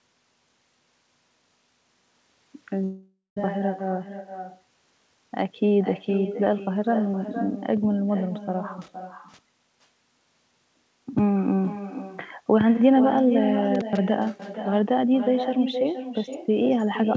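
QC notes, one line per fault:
Throughout: echo with no canceller. Every phrase is shadowed about half a second later by a thinner copy roughly 10 dB quieter. The far end is playing the call on a loudspeaker, its microphone picks it up, and nothing removes it before it returns.
2.84–3.37 s: long network dropout. The sound smears into a fading buzzy continuation, then goes silent for about 0.15 s, and resumes with roughly half a second missing. The likely cause is a stretch where no packets arrived and the receiver concealed the gap before giving up.
8.81–9.39 s and 13.75–13.99 s: intermittent contact. The sound cuts out with crackle at each edge, leaving only faint hiss for about 0.46 s and then 0.12 s. A loose cable or plug briefly opened the signal path, and the crackle comes from the contact making and breaking.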